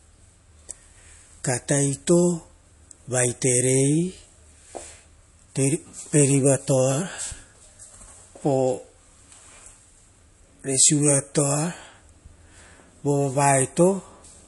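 Throughout the speech, the sound is plainly watery and swirly, with nothing above 11.3 kHz. This is likely MP3 compression. Short of bits, the encoder removed the treble and switched weak frequency lines on and off between frames. The damage fits roughly 48 kbps.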